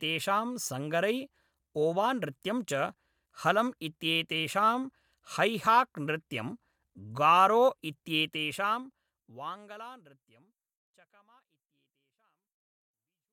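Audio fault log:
No faults heard.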